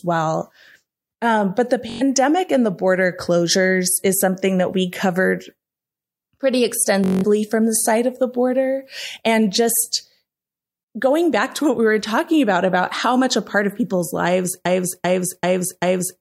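At 1.90 to 2.02 s, between "but the" and "and the border closures", and again at 7.04 to 7.25 s, just before "from the side of", there is Bluetooth stutter. Late or lost packets make the receiver replay its last short buffer, producing a brief buzzing repeat. Playback then resumes further on, skipping about 0.11 s and 0.19 s of speech respectively.

From 14.65 s, right after "part of people's lives", a broken-record loop begins. A 0.39 s fragment repeats exactly, back to back, four times until the clip ends. This is likely a stalled player or stream resending its last held chunk, so whatever followed is lost.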